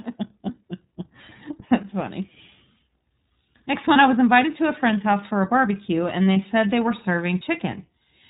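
Speech runs throughout through the iLBC codec, sounding plainly rough and synthetic, with a spectrogram showing nothing above 4 kHz, which fits iLBC's 30 ms mode at about 13 kbps. Lost iLBC frames appear at 3.92–3.96 s, just before "I was invited to", and at 6.33–6.37 s, between "for a barbecue and" and "said they were". Each gap, about 30 ms, is filled with a slightly buzzy or breathy repeated pitch cycle, visible as a short, regular periodic stretch in the waveform before normal speech returns immediately.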